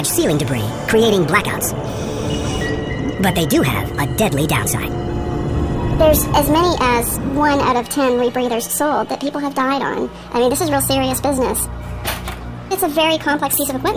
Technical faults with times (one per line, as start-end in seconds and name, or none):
0.00-13.97 wrong sample rate